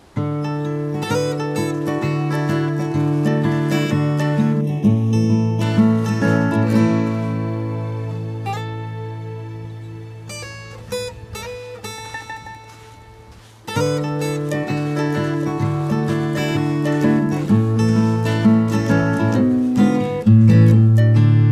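From 4.61 s to 5.61 s there is channel delay (comb filtering): one channel lags the other by a fraction of a millisecond, around 0.3 ms, and when the pair folds to mono the shared content cancels at regularly spaced frequencies. The first notch falls near 1.5 kHz, with further notches stacked above it at equal intervals. For that second the sound turns hollow and phasey, losing presence in the upper mids.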